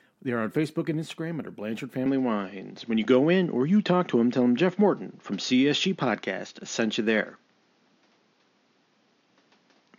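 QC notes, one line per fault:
2.06 s to end: input switched to a poorer device. With no gap at the change, the speech loses everything above 6.9 kHz and turns duller and boxier, the level shifts by roughly 5 dB, and a new noise floor appears about 40 dB down, likely from a different microphone or headset path.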